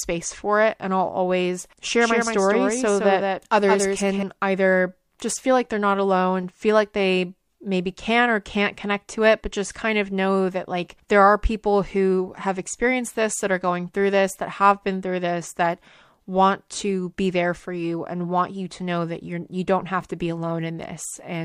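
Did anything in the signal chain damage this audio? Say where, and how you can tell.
Yes. From 2.01 to 4.23 s the speech carries a hard, full-band echo roughly 150 ms behind, about 5 dB quieter, with no decay or room colour, starting and stopping abruptly: a doubled audio track, likely from a second, slower capture path mixed in.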